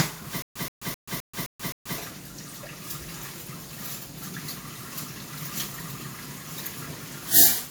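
Throughout, the sound is swirly, smeared and hollow, with blurred attacks and nothing above 20.1 kHz: generation loss, likely from around ten WMA re-encodes, consistent with 96 kbit/s. From 0.42 to 1.98 s, a 127 ms burst repeats six times every 260 ms with 133 ms of digital silence between. This is a stutter with silent gaps, likely where a stalled stream replays its last fragment, and the audio meant for that span is lost.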